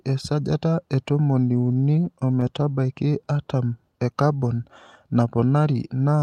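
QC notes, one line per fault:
1.61–2.90 s, repeated stalls (stutter): a dozen brief holds, none longer than 16 ms and about 115 ms in all, where late-arriving packets let the jitter buffer run dry and the receiver stretched the last sound until data resumed. Nothing is lost, but roughly 9% of the span is filler, so the speech drags and catches. The spectrogram shows short smeared, frozen-looking columns, and the waveform shows tiny repeated stretches.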